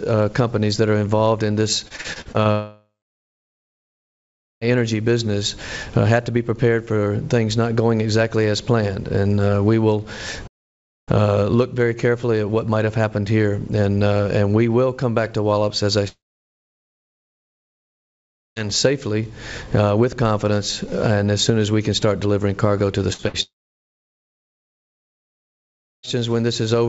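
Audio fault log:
1.88–2.48 s, repeated packet loss (robotic sound): Over this stretch the sound turns choppy and metallic, breaking up in rapid stutters. Seven short holes, the longest 40 ms, open one after another, and each is patched by stretching out the sound just before it. About 30% of the span is filled this way and roughly 210 ms of real audio never arrives, which gives the synthetic, robotic texture.
2.51–4.67 s, 16.08–18.59 s and 23.43–26.06 s, long network dropout: Each time the sound smears into a brief fading buzz or hiss, then goes quiet for a long spell: about 1.7 s, 2.4 s and 2.5 s of silence. It returns further along with a chunk missing, about 2.1 s, 2.5 s and 2.6 s. This is likely a stretch where no packets reached the receiver. The receiver extends the last sound for a moment and then gives up.
10.47–11.09 s, playback stall: The sound halts abruptly in mid-flow for about 0.6 s of silence with no fading tail, then carries on. 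That clean stop-and-resume is likely the player starving for data or its thread being blocked. Output simply stops until it recovers, unlike network loss, where the receiver tries to patch the gap with continued sound.
23.13 s and 23.28 s, burst of packet loss: Two quick dropouts, each about 60 ms, come in close succession and lead straight into the final dropout. Each one is heard as a short held buzz or fading smear, with a small slice of audio missing when the sound resumes. A run of packets failed to arrive in time, and the receiver bridged each hole by continuing and turning down the last sound. The G.722 call path cuts off the band at about 7 kHz.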